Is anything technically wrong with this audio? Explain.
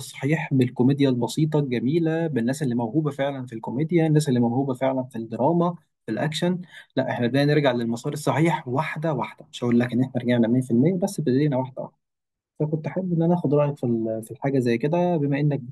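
No, nothing technically wrong can be heard in this speech recording. The audio comes through steadily from beginning to end, with no faults to point to.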